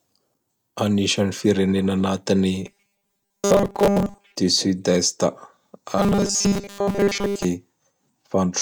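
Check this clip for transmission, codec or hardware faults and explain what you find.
Two transmission faults are present, both robotic sound from repeated short buffers, at 2.66 to 4.36 s and 5.98 to 7.45 s. Audio likely arrived too seldom, so a 5 ms segment was looped in place of most of the real speech, forcing a rigid, metallic 200 Hz buzz that loosely follows the speech.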